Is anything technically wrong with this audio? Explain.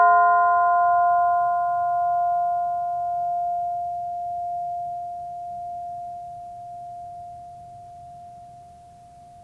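No, nothing is technically wrong with this music.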